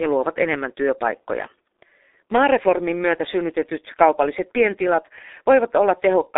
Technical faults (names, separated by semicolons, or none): G.723.1 codec